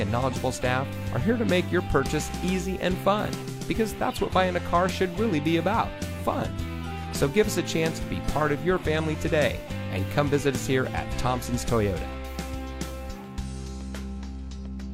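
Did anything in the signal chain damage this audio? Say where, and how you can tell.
No, nothing in the chain stood out as damaging the audio when I listened to it.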